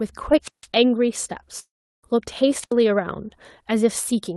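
At 0.43 s a burst of hiss swells up, then the speech drops into near silence for about 155 ms before returning by 0.66 s. This is a wireless microphone squelch dropout: the analogue FM radio link weakened until the receiver's squelch gate shut the output. The same pattern returns from 2.61 to 2.73 s, shorter this time, with a mute of about 78 ms.

Between 1.59 and 2.06 s the speech gives way to a smeared buzz that fades out, leaving roughly a third of a second of silence before the speech resumes further along. Nothing is repeated to cover the gap, so about 440 ms of the speech is simply missing. The likely cause is a long network dropout: no packets arrived for that stretch, so the receiver stretched the last sound to fill it before going quiet.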